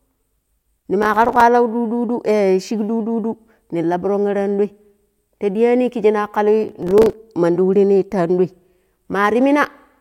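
From 1.03 to 1.41 s, the speech breaks into processor overload crackle. The processor missed its deadlines on buffers of only a few milliseconds, again and again. Each miss drops in a short silent gap with hard edges. The gaps fit around twenty missed buffers. Together they sound like gritty tearing over the speech. The same crackle returns from 6.68 to 7.13 s, pointing to around fifteen missed buffers. It stops when the load eases.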